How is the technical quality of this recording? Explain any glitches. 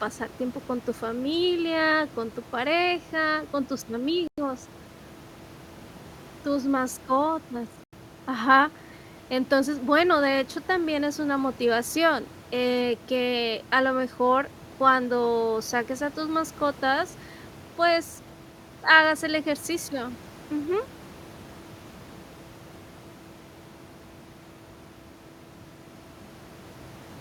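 The speech carries two brief dropouts to silence, with room noise sitting about 22 dB below the voice. Both gaps are likely Bluetooth stalls. The first runs from 4.27 to 4.38 s, just after "tu pareja con tus", lasting about 103 ms. The second spans 7.84 to 7.93 s, about 90 ms. Delayed wireless packets let the headphone buffer empty. Playback halts, then resumes where it stopped.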